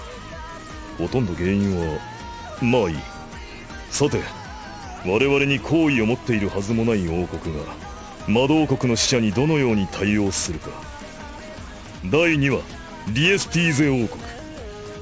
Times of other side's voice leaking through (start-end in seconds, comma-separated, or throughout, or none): none